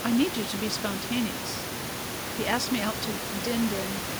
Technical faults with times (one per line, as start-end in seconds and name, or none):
none